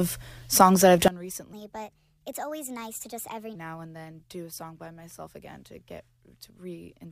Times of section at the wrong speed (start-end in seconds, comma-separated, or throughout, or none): 1.53-3.55